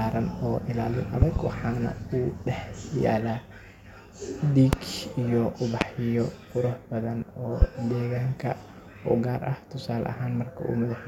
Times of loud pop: 1.22-1.39, 4.73-4.76, 5.81-5.84, 7.62-7.65

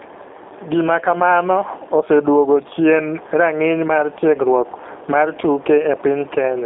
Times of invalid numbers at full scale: none

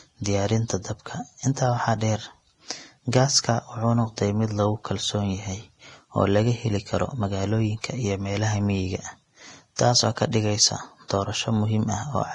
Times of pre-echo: 9.76-9.79, 11.08-11.10

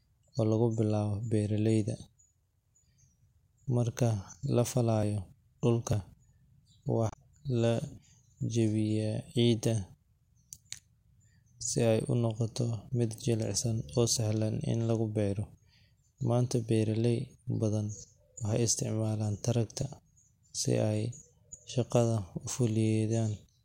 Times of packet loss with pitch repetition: none

